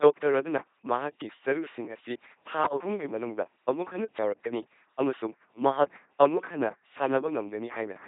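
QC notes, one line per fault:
throughout, LPC-10 vocoder: a pulse-or-noise-driven filter rebuilds the speech, which fits a 2.4 kbit/s rate, causing heavy mechanical buzz, misvoiced hiss, and nothing above 3.8 kHz.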